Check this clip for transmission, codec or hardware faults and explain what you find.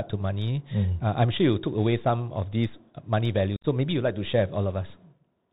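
Two faults are present: a narrowband headset codec throughout, and a brief dropout late in the speech.

The Bluetooth CVSD headset codec is audible for the whole clip. Each sample is coded as one up-or-down bit, consistent with a 64 kbps link. Nothing above 4 kHz survives. Loud high sounds outrun the adapting step and distort. A granular hiss sits underneath, and the codec damage is plainly audible.

Unconcealed Bluetooth headset packet loss occurs from 3.56 to 3.66 s. About 67.5 ms of speech goes missing within a 75 ms span, which fits roughly ten short voice packets dropping between headset and phone. The longest single gap is 52.5 ms. Nothing fills the holes, so the speech chops abruptly.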